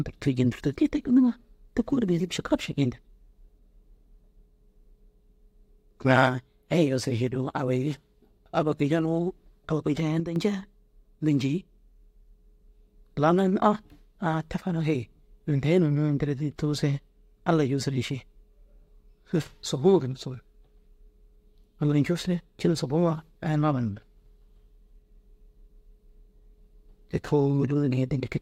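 At 10.2 s the digital gain was likely changed in a single step with no ramp, a sudden gain jump. The speech and its background noise drop together by about 7 dB at once, holding that lower level until 10.36 s.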